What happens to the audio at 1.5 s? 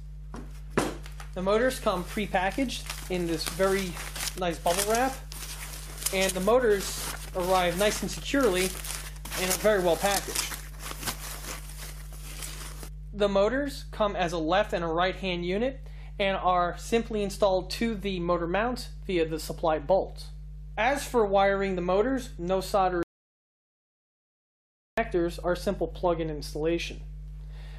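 Mains hum is present at 1.5 s, as it is for the whole clip. Power-line energy, likely from a ground loop or a nearby transformer, has leaked into the signal, leaving a steady 50 Hz drone with low harmonics, sitting roughly 15 dB below the wanted sound.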